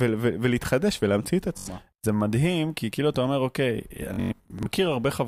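At 1.58 s the speech hits a Bluetooth stutter lasting to 1.68 s. Packets went missing, so the receiver kept replaying its last short slice of audio, about 85 ms of sound lost in total, heard as a quick buzzy judder. A worse patch runs from 4.14 to 4.66 s, with about 300 ms lost across half a second. The longest gap, about 107 ms, gives a proper machine-gun rattle before the speech picks up further along.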